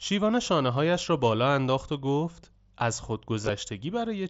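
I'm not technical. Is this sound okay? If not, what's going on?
No. Between about 3.42 and 3.49 seconds the speech briefly takes on a buzzy quality, with a small wobble as normal sound returns. This is concealed Bluetooth headset packet loss. Several short pieces of audio went missing between the headset and the phone over about 75 ms, the longest gap around 22 ms. The receiver filled each gap by repeating a closely matching scrap of the sound just before it, which causes that buzz.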